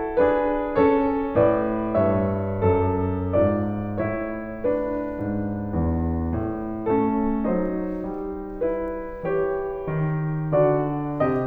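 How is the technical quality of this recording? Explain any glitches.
No technical glitches can be heard anywhere in this music recording. Nothing in it calls for explanation as a fault.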